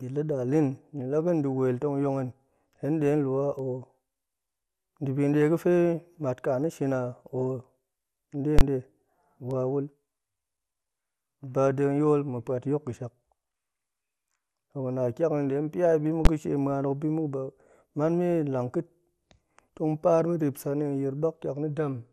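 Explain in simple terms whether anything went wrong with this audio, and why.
Two things went wrong with this speech recording.

Throughout the clip, the sound was most likely squeezed through MP2 compression with too little data to work with. This kind of compression splits the sound into many narrow frequency slices and shares out a limited budget among them. When the budget runs short, the highest slices get switched off and the rest are stored roughly. Here that makes the speech sound dull and muffled, with a gurgling, grainy roughness that comes and goes as those upper slices flicker on and off.

Twice, a calculation in the processing chain broke down and produced invalid numbers at full scale, which were pushed to one extreme value, far beyond the speech's own peaks. For that brief stretch the output jams flat at that extreme instead of carrying any real sound. From 8.59 to 8.61 seconds this is heard as a very loud pop at each end of a tiny silent gap. 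At 16.25 seconds the stretch is even shorter, so it comes across as a single sharp bang.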